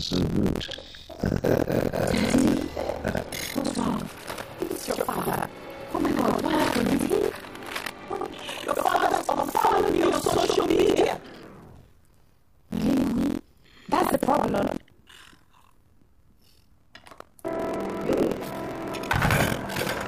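Buffer tearing runs through the whole clip. The writing side and the reading side of the ring buffer have drifted so that they meet partway through each period. Around two fifths of every buffer plays stale audio from roughly a tenth of a second earlier, with hard seams at both ends. This produces a steady rattling buzz at 43.1 Hz, which fits a 1024-sample buffer, and the buzz is present only while there is signal.

From 14.47 s to 15.10 s a different fault joins in: robotic sound from repeated short buffers. Fresh audio is likely arriving too rarely, so the last short stretch, about 15 ms, is looped to fill the gaps while most of the real material is skipped. The constant repetition imposes a fixed 66.8 Hz buzz, giving a stiff, metallic drone that follows the underlying sound's contour only loosely.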